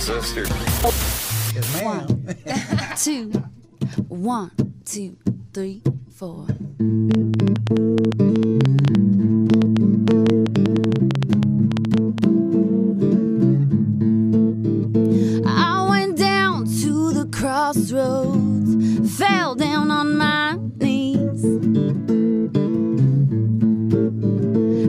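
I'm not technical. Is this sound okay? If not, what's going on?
No. From 7.11 to 12.25 s there is a train of clicks: about 50 sharp ticks at roughly nine per second, unevenly spaced and loud against the sound. The likely cause is electrical interference from nearby equipment or a faulty connection or power supply.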